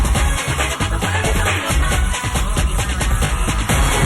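A brief stutter at 1.67 to 1.70 s, where a 20 ms fragment plays twice, and again at 3.25 to 3.32 s, where one plays three times. These are repeated frames: a compressed block, fitting a single 20 ms frame, was sent again, lengthening the audio by 20 ms and 40 ms.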